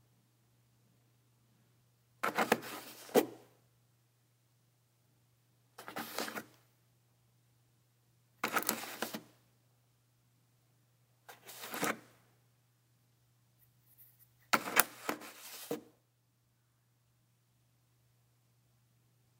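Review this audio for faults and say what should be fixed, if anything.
Nothing needs to be fixed, as no faults turn up in this audio.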